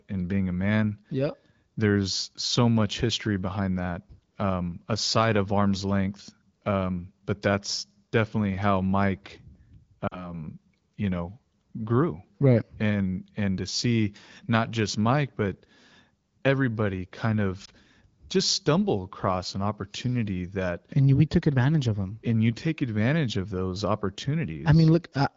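Lost AMR speech frames at 10.07 s (40 ms) and 17.65 s (20 ms, after "everybody kind"): corrupted frames made the wideband decoder reuse the last good pitch and vocal tract settings at falling gain, so the first drops to near silence within two frames and the second gives a brief dip or warble.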